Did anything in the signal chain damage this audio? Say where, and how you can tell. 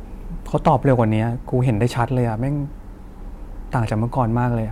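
Yes: hard clipping from 0.67 to 0.99 s. Peaks hit a converter or gain ceiling by about 4 dB and get flattened, so you hear crackly grit.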